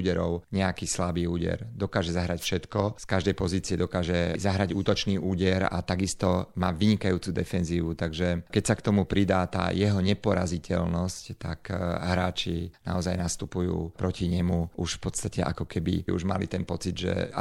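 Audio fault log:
2.38 to 2.50 s, wireless microphone noise hit. A short burst of static cuts across the speech for about a tenth of a second. The radio link from the microphone faded briefly. Reflected copies of the signal arrived out of step and partly cancelled at the receiver. With less signal to lock onto, the receiver's own hiss rose and broke through. That is why it sounds like a quick swish over the voice.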